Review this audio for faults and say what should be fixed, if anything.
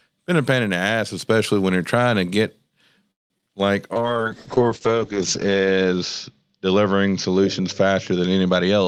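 Packet delivery likely stalled long enough for the jitter buffer to run dry, producing a call audio freeze from 3.11 to 3.32 s. The receiver stretched the last sound briefly, then went quiet for about 180 ms before the speech resumed exactly where it had stopped. Nothing is lost; a gap of roughly 187 ms is inserted and the whole call runs that much later from here on. A deeper jitter buffer target, or a network path with steadier delivery, would prevent this.

Two short concealed packet losses follow right behind, at 3.38 to 3.41 s and 3.41 to 3.44 s. In each, a few hundredths of a second of audio failed to reach the decoder in time, so the receiver carried the previous sound forward and blended back into the real signal. The result is a quick smear or wobble, with about 20 ms of actual speech missing in each case. Better loss resilience, such as Opus in-band FEC, would prevent this.

A skip ahead occurs at 3.48 to 3.51 s. 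A stretch of audio was dropped, in transit or by the jitter buffer, while later audio was already waiting. Roughly a tenth of a second of speech is gone, and the two sides are butted together with only a few milliseconds of filler, so the sound jumps abruptly forward. This cancels most of the delay the freeze added. Smoother buffer management that drains excess delay by gradual time compression would prevent this.

A jitter buffer slow-down runs from 3.93 to 5.15 s. The receiver rebuilt its reserve by repeating individual pitch periods and fragments of pauses. Speech plays at about 91% of normal speed without any change in pitch, adding 114 ms in total, so sounds drag over that span. A buffer target that adapts less abruptly after the earlier disruption would prevent this.

A call bitrate drop begins at 3.96 s and lasts to the end of the clip. The bandwidth estimate collapsed, and the Opus encoder fell from 40 kbps to 8 kbps, holding the lowest rate for about 1.16 s. 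At that rate coding turns coarse and the upper limit narrows to 8 kHz, so the voice sounds muffled and watery. Before the drop, the call path at 40 kbps carries audio up to about 12 kHz. Steadier bandwidth estimation or a higher minimum bitrate would prevent this.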